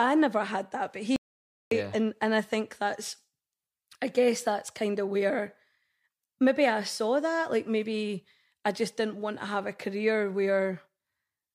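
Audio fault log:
1.16–1.71 s, audio dropout to silence: the input feed was likely lost, perhaps through a disconnected device, a failed link or a stray mute, while recording carried on writing silence. Right after "never had that but" the speech cuts to dead silence with no room tone for about 0.55 s, and whatever was said then is gone.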